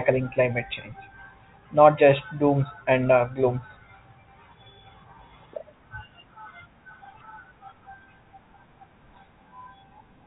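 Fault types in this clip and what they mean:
Nothing stood out on listening to the speech here.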